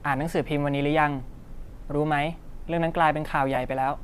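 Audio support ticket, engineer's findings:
Lost LE Audio frames at 1.67 s and 3.55 s: brief grainy smears in the speech, about 15 ms and 7.5 ms, fitting two frames and one frame of LC3 at 7.5 ms. Spectrogram shows noisy vertical smudges replacing harmonic lines.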